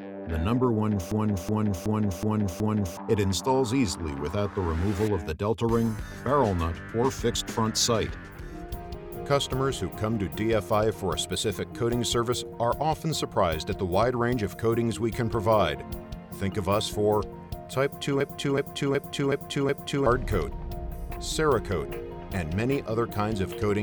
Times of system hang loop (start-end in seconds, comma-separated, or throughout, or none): 1.11-2.97, 18.20-20.06